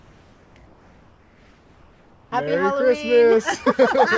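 From 0.00 to 0.56 s and again from 0.66 to 2.32 s, the background turns into a flat, textureless hiss, about 2 dB and then about 3 dB quieter. This is comfort noise in place of the background, likely from discontinuous transmission synthesising noise during pauses, heard through a band that stops at 8 kHz.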